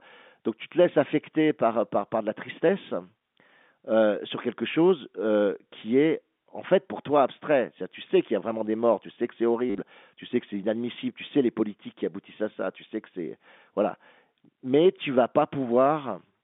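From 9.7 to 9.78 s, just after "tu sais que c'est", packet loss with last packet repeated causes a short robotic stutter. About 60 ms goes missing over 80 ms, with the longest run 50 ms. The repetition buzzes, pointing to roughly 10 ms packets on this G.711 telephone line.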